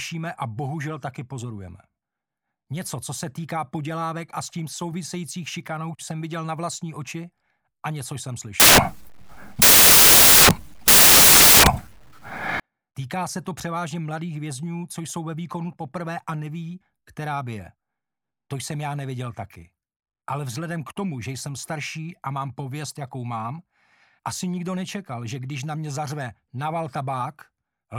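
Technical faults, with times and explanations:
8.60 to 12.60 s, samples built from the wrong bytes: for four seconds each sample is assembled from mismatched bytes, so the rapidly changing low bits become the dominant part of each value. The result is loud, harsh broadband noise, close to white on the loud sounds. Ordinary added hiss or a noise burst sits at a steady level independent of the material, whereas this noise collapses in silent moments because it is built from the signal itself.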